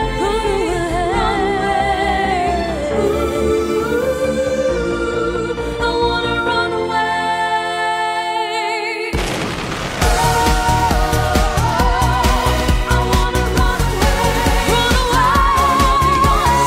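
Nothing stood out on listening to the recording.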